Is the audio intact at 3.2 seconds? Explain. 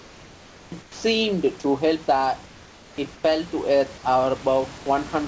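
No. From 3.14 to 3.24 s the background turns into flat, detail-free hiss about 3 dB quieter, likely comfort noise in place of the background, synthesised while transmission paused. Unlike a dropout, it never goes silent.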